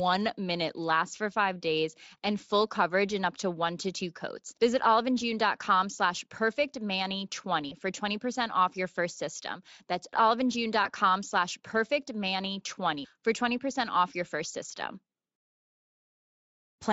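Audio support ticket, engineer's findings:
VoIP packet loss concealed by the speech codec, 7.69 to 7.73 s: single dropped packet, fitting one 20 ms frame; decoder extrapolates last pitch and filter, brief smear with gain dip.
Same fault, 10.83 to 10.90 s: one lost frame again; concealed sound fades, then recovery drags, weak or distorted as following frames rebuild state. Speex path carries through with only light coding colour, consistent with a fairly high quality setting.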